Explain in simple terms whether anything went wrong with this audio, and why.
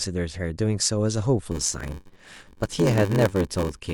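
From 1.51 s on there's a block size mismatch (padded). Silence fills out each short block, causing a 93.8 Hz buzz and slowing the speech to 0.861× speed.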